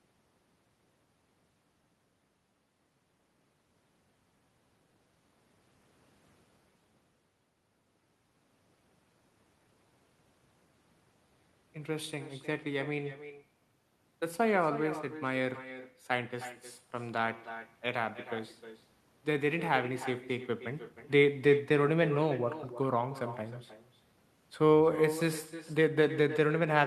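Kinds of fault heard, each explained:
Echo with no canceller: The far end's loudspeaker output reaches its microphone, and nothing removes it. So the speech comes back throughout the clip, roughly 300 ms late. The copy sits about 12 dB below the original and sounds thinner.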